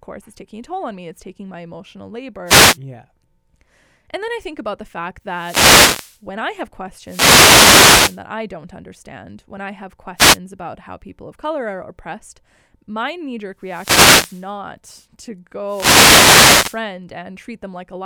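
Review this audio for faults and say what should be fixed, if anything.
Wireless microphone noise hits turn up six times in this speech: 2.45 to 2.78 s, 5.27 to 6.24 s (right after "think about the fact", before "I have"), 7.03 to 8.22 s (between "I have" and "I don't understand when"), 10.16 to 10.38 s, 13.59 to 14.53 s (after "oppressed my knee jerk"), and 15.65 to 16.83 s. Each is a swish of static over the voice. The FM radio link dropped out as reflected signals cancelled the direct one, so the receiver's own noise rose up. Worth fixing with diversity receivers, well-placed antennas with clear line of sight, and a fresh, clean frequency.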